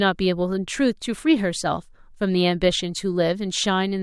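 Speech recording, no technical faults detected.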